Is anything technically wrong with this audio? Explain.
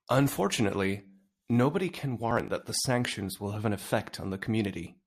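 Yes. There is a burst of processor overload crackle in the speech from 2.31 to 2.48 s. The processor could not finish its small audio buffers on time, so several deadlines were missed in a row. Each missed buffer was simply skipped, leaving a tiny hole with hard edges. The spacing points to buffers of around 10 ms, with about five lost. Together these holes sound like a short gritty tearing over the speech that stops once the load clears.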